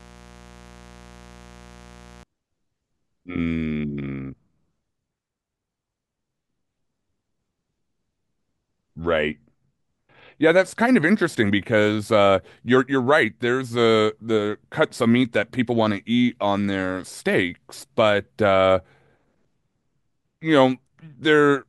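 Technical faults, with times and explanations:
0.00–2.23 s, mains buzz: a steady, raspy buzz sits under the speech for the first two seconds, roughly 25 dB below it, then stops. Its fundamental is 60 Hz. Sharp switching spikes, of the kind a dimmer or rectifier throws onto the supply or an unshielded line picks up, arrive twice per mains cycle. They spread energy into harmonics of 60 Hz reaching several kilohertz, which is why the buzz sounds gritty rather than like a pure hum.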